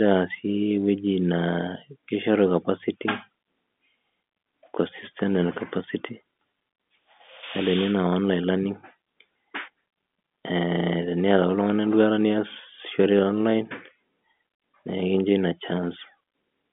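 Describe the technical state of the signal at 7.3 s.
At 7.3 s the audio is intact, with no fault present; what can be heard is the ordinary narrow band of G.711 telephone coding, with nothing above about 3.8 kHz.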